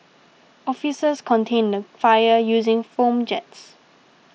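No technical faults present.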